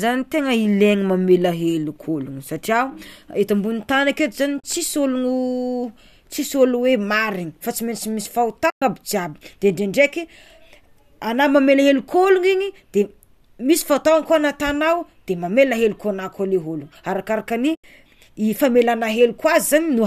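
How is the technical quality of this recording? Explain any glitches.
The speech has three short dropouts, caused by AAC frame loss with muting. Light coding texture is also audible throughout, likely from low-delay AAC compression.

The dropouts fall at 4.60 to 4.64 s (40 ms), 8.70 to 8.82 s (120 ms) and 17.75 to 17.84 s (90 ms). At each point, compressed frames went missing and the decoder filled their spectrum with zeros. The durations fit runs of roughly 10 ms frames. Because the overlapping windows taper the signal, each gap fades out and back in rather than cutting abruptly. The result is a soft-edged silent hole, longest at 8.7 s.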